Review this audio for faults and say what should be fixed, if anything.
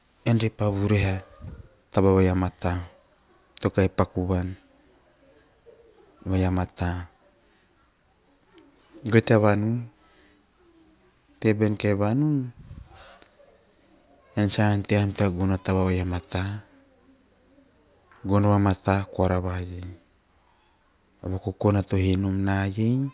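Nothing in this speech recording calls for a fix. Careful listening across the whole clip turns up no technical problem that needs correcting.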